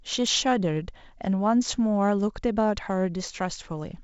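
A speech clip carried over G.722, band-limited below about 7.7 kHz, with periodic USB or driver dropouts: tiny skipped slivers every 0.5 s from 0.27 to 3.78 s, heard as regular ticks.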